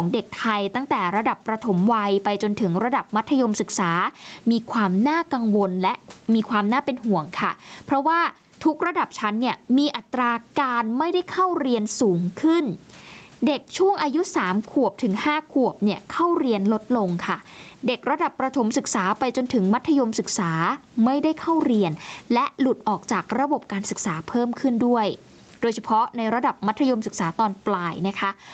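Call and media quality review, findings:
Gain pumping throughout: level swing around 15 dB. Likely cause is excessive mic gain with a fast limiter clamping peaks, compressing dynamics. Room noise sits about 43 dB below speech, band-limited at 8 kHz.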